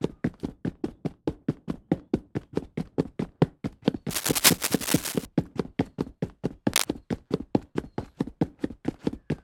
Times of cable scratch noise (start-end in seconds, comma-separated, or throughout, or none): 4.10-5.26, 6.70-6.85